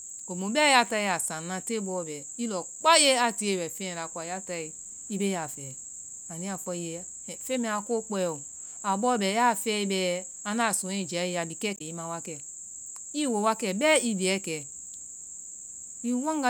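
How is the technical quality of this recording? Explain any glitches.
One glitch stands out. From 11.75 to 11.81 s, damaged data in the compressed stream makes the decoder misread frames and hunt for sync, producing a brief glitch.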